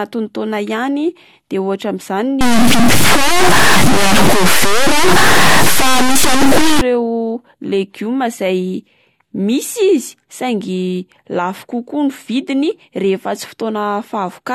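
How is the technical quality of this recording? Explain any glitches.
There is one fault, in the speech. From 2.41 to 6.81 s a stuck bit, likely a broken data line or converter, holds one bit fixed, pushing roughly half the samples off by its weight. That gives distortion, and pauses fill with noise as small values flip sign.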